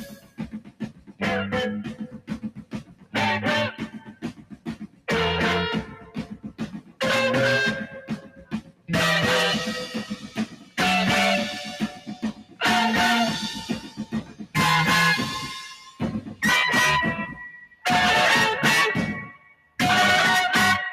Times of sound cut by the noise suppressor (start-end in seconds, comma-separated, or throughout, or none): 0.00-20.92